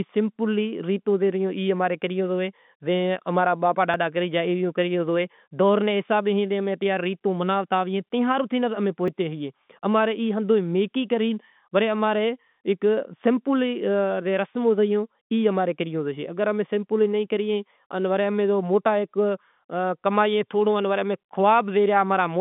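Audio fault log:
3.94 s and 9.08 s, dropped buffer (overrun): at each point there's a small jump forward in the speech. At 3.94 s it falls between "اماں را ابا" and "کری گیا". Roughly 20 ms goes missing each time, with no gap of silence. The audio on either side is just butted together. That's most likely the program not collecting its samples before the hardware wrote over them. The telephone-band sound of the G.711 line carries on straight through both skips.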